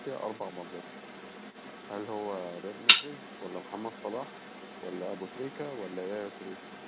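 A second, fainter voice runs underneath the main talker for the whole speech clip, from 0.0 to 6.9 s, sitting around 10 dB below the foreground and heard within the narrow, telephone-like band that stops near 4 kHz, which fits a G.711 mu-law call path at 64 kbps. This is the other side's voice leaking through, likely because the far end played out of the talker's loudspeaker and the echo canceller left a residual in the microphone signal.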